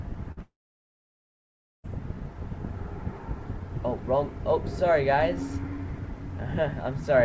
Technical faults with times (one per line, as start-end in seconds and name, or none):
0.32-0.39 burst of packet loss
0.42-1.86 long network dropout